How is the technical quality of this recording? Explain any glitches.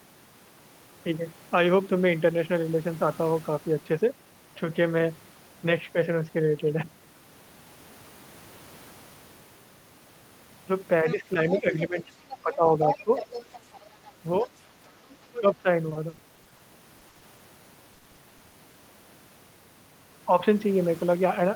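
The recording has clear, repeated glitches in its second half, from about 11 s to 18.8 s: speech dropping out, a second voice bleeding in, then choppy robotic stretches.

Speech suppressed in double talk occurs from 11.04 to 13.11 s, 14.22 to 14.49 s and 15.40 to 15.67 s. The talker's level dips by about 10 to 15 dB. The likely cause is an echo canceller ducking everything while both sides spoke. On a waveform this appears as sudden envelope notches, and on a spectrogram as fading upper harmonics.

The other side's voice is leaking through from 11.08 to 13.59 s and from 14.39 to 15.41 s, about 10 dB below the talker. It is likely residual loudspeaker echo that the canceller left in the microphone signal. On a spectrogram it shows as a fainter, separate harmonic pattern overlapping the main speech.

Repeated packet loss (robotic sound) spans 15.89 to 16.61 s, 16.99 to 17.41 s and 17.93 to 18.75 s. 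Short holes, none longer than about 60 ms, are each patched by extending the previous sound, which concealed roughly a quarter of each stretch. The result is choppy audio with pieces missing. A spectrogram shows smeared, repeated frames between abrupt gaps.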